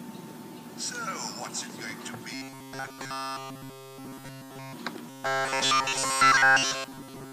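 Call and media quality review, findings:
Rigid 134 Hz metallic buzz, 2.34–4.73 s and 5.10 s to end: robotic sound from repeated short buffers, likely 7.5 ms loops replacing essentially all audio.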